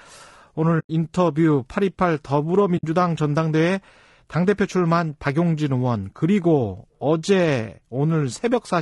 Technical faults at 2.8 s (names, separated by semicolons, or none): low-delay AAC compression; AAC frame loss with muting